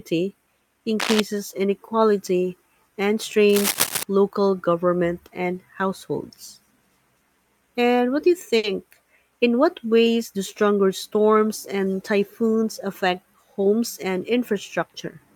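From 1.00 to 1.20 s, just before "inequality and", and again from 3.49 to 4.03 s, between "inequality and" and "local government and households", there are bursts of cable scratch noise: dense, uneven scratching and rustling only a few dB below the speech. The likely cause is a worn connector or cable being moved so that its contact resistance jumps about. On a spectrogram these show as ragged broadband smears. The waveform carries spiky, irregular fuzz over the speech envelope.

At 8.57 s, for about 80 ms, there is a short stall from a late packet. The jitter buffer ran dry, and the receiver held the last sound for roughly 60 ms until the packet arrived. Playback then resumed with nothing lost, but about 60 ms later than before. It is heard as a briefly frozen, slightly buzzy hold. On a spectrogram it looks like a smeared, horizontally streaked patch. The waveform shows repeated near-identical cycles.

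From 12.55 to 13.68 s, right after "do stronger storms and", a jitter buffer speed-up plays the speech about 4% fast while keeping its pitch. To shrink an overfull buffer, the receiver removed short pitch-period pieces, about 50 ms in all. A spectrogram shows unchanged harmonic spacing but compressed syllable timing. The waveform has tiny splice points where cycles were dropped.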